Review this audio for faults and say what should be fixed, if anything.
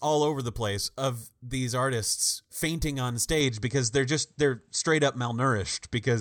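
At 3.41 s the speech abruptly turns duller and stays that way to the end of the clip at 6.20 s. Everything above 8.3 kHz vanishes, and a new, faint background noise appears about 50 dB below the speech. The level stays roughly the same and there is no gap at the change. The likely cause is an input switched to a poorer device partway through, with a narrower-band microphone taking over the recording. On a spectrogram the upper band goes empty from 3.41 s onward, leaving a hard horizontal ceiling at 8.3 kHz. The waveform shows no break or level step at that point.

To prevent this, lock the recording to one chosen input device for the whole session and turn off automatic device switching, so that a headset or other microphone connecting mid-take cannot take over the input.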